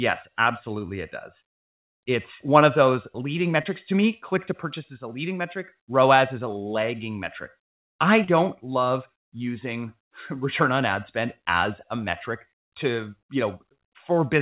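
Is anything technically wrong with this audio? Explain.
Yes. There are two short concealed packet losses. The first runs from 3.62 to 3.68 s, just after "one of those leading". The second runs from 8.24 to 8.30 s, between "a lagging metric I" and "love using". Each time, about 30 ms of audio arrived too late to decode. The receiver patched the hole by extending the preceding sound and then blending back into the real signal. You hear a brief smear or wobble. In this narrowband call audio, with nothing above 4 kHz, that fits G.711 mu-law.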